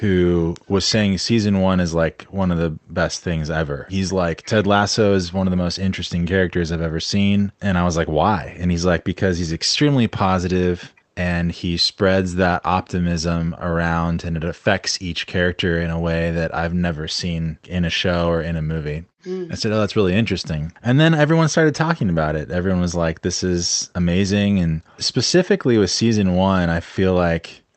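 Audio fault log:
Nothing here stands out as a fault, just speech carried over a call link whose top end sounds capped around 8 kHz, which fits a call codec running at a modest bitrate.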